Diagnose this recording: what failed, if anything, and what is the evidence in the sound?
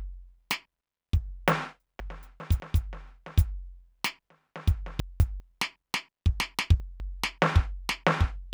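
Chunks out of order at 2.0–2.6, 5.0–5.4 and 6.4–7.0 s: the buffer plays a 200 ms music block one or two blocks late, causing jumbled joins.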